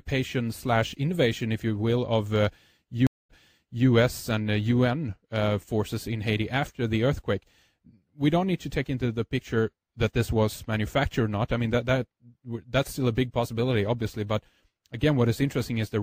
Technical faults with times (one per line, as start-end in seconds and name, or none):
3.07-3.87 stream reconnect